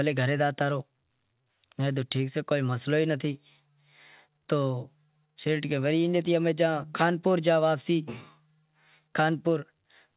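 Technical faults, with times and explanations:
Nothing stood out on listening to this speech clip, which carries the narrow, telephone-like sound of a call path with nothing above about 4 kHz.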